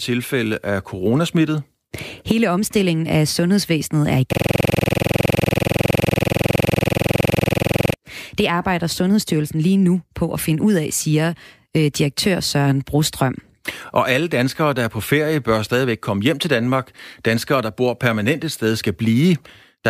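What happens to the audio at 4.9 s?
At 4.9 s the system is in a hang loop: the computer or driver froze after "af sundhedsvæsenet er i" while the audio hardware kept replaying one 46 ms stretch of its buffer, which fits a 2048-sample buffer. From 4.33 to 7.94 s the sound becomes a rough, steady buzz repeating at 21.5 Hz.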